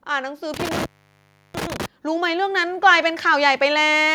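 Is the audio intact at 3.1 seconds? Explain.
No, automatic gain rising is underway from 2.02 to 3.32 s: the gain control, finding the input too quiet, ramps up about 6 dB, so speech and background swell together.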